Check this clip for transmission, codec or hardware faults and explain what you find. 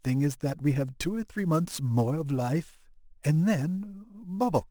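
There is one fault, sample clock jitter, and it runs through the whole speech clip. The converter's sampling instants wander by around ten microseconds, so each sample is taken at a slightly wrong moment. The resulting error tracks how fast the waveform is changing, sitting roughly 25 dB below the signal. It comes across as a grainy hiss riding on loud, bright passages and disappearing in pauses. A steady noise floor, by contrast, would keep hissing through the silences.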